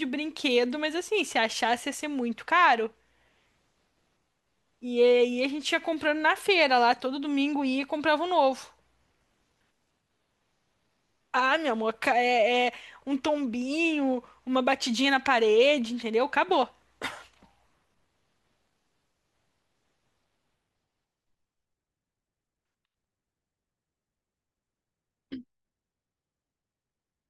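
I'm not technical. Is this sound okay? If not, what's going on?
Yes, nothing in the recording points to a technical problem with how the sound was captured or passed along.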